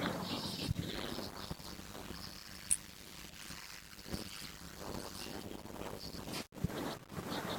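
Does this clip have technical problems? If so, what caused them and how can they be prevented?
Yes. From 0.90 s to 6.28 s the speech carries a steady 100 Hz buzz and is drawn out to about half speed (0.533 times normal) while keeping roughly its usual pitch. This is a padded block size mismatch: one stage writes short blocks, which fits 256-sample blocks, while the next reads longer ones, about 480 samples, and zeros fill the remainder. Each block gets a small silent gap, producing the buzz at the block rate and the slowdown. Prevention: make every stage in the chain agree on one buffer size, or put a proper buffering stage between them.

Two brief glitches occur in the speech, one from 3.29 s to 3.31 s peaking near -40 dBFS and a slightly louder one at 4.44 s near -35 dBFS. Each is a corrupt frame decoded: flipped bits in a single compressed frame were played anyway, so misread gains and codes scattered energy to wrong frequencies for that frame's length. 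Prevention: check each frame's integrity before decoding and conceal or replace damaged frames rather than playing them.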